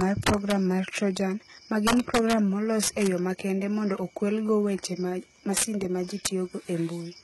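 HE-AAC compression runs through the whole speech clip. It is likely at a bitrate around 16 kbps, with nothing above 11.8 kHz. Its rebuilt treble is copied upward, leaving s sounds gritty and metallic.

Integer overflow cracks violently at 0.01–0.52 s, 1.87–2.33 s, 2.83–3.07 s (just before "yo makende mondo okwelgo"), 5.57–5.64 s (between "mondo okwelgo weche mag" and "ma ji"), and 6.25 s (after "ma ji"). Peaks about 3 to 15 dB too loud wrapped to the opposite sign instead of being limited.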